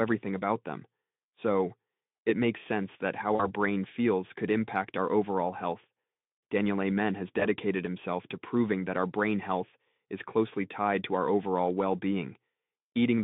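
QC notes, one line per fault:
3.35–3.47 s and 7.39–7.47 s, VoIP packet loss concealed by the speech codec: between "makes sense that how" and "brain feels could impact," then before "himself to proving that," speech smears into a brief buzzy tone or coloured noise that fades. The decoder extrapolated over gaps of about 40 ms and 20 ms, and the damage lingers for tens of milliseconds after audio resumes.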